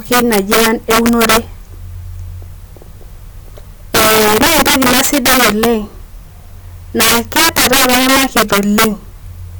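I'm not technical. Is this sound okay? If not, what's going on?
No. The problem is an integer overflow, present throughout the speech. Somewhere in the processing, the level was pushed far too high, and instead of being capped at the loudest value the system can store, the number wrapped around to the opposite extreme. So every loud peak suddenly flips from its top to its bottom. You hear this as harsh, violent cracks on the louder parts of the speech, much sharper than ordinary distortion, affecting a small but steady fraction of the sound.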